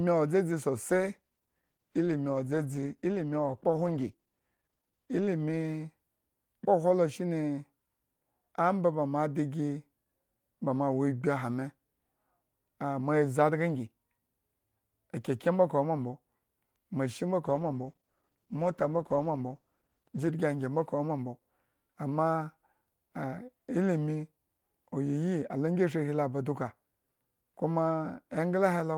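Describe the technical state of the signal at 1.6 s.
At 1.6 s the speech is inside a call bitrate drop running from 0.9 to 6.15 s. The encoder's rate falls from 32 to 15 kbps and holds its lowest level for 4.44 s, so coding turns coarse and highs are trimmed, leaving the sound rough and muffled.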